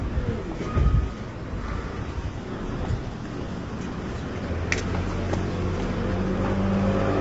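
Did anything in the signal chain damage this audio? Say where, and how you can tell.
Yes, at the codec stage, and for the whole clip. The sound is plainly grainy and rough throughout, and nothing remains above about 7.8 kHz. That points to low-delay AAC compression, likely AAC-ELD at a rate that fits roughly 24 kbps. Its short frames cannot resolve closely spaced tonal components, so quantisation noise smears between them. On a spectrogram you would see a hard ceiling near 7.8 kHz and speckled, blurred harmonic lines.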